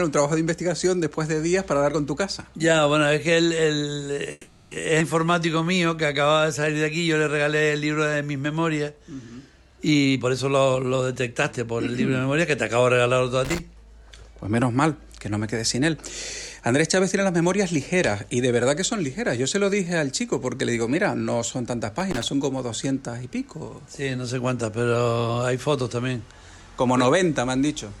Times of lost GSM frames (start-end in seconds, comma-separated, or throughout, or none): none